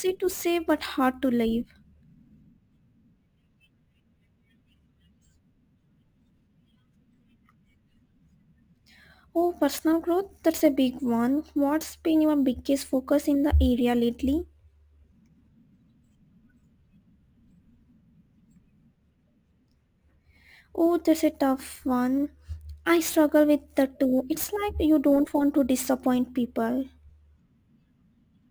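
Crude rate conversion runs throughout the speech. The resampling was done without a proper filter, each output sample simply taking the nearest input sample, which fits a conversion from 32 kHz to 44.1 kHz. Because the ratio between those rates repeats in a fixed pattern, the timing error produces shifted, inharmonic copies of the speech, sitting roughly 25 dB below it. The result is a gritty, inharmonic fizz that rides on louder and brighter syllables.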